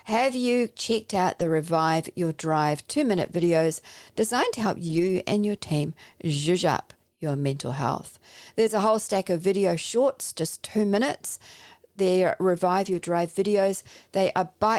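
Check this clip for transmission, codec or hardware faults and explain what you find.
Four stretches of lost packets rebuilt from error correction, at 1.39–1.49, 3.17–3.47, 4.87–5.09 and 12.85–13.03 s: lower-bitrate backup copies fill each gap, so the speech continues without a gap but sounds briefly rougher and noisier.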